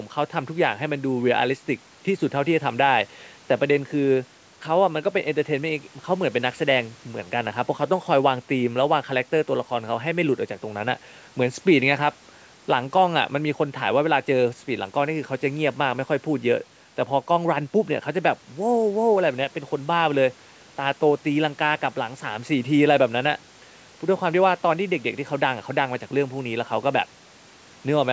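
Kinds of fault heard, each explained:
No faults can be heard anywhere in this speech.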